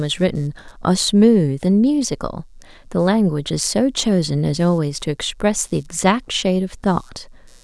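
Computer activity noise runs under the speech from start to finish: a faint buzzing, pulsing at roughly 150 times a second, sitting about 40 dB below the signal. Its texture shifts with the computer's workload rather than with the speech, which marks it as interference from the machine itself. Changing load on the processor, graphics card or mouse modulates the ground shared with the audio circuit, and that ground movement leaks into the recording.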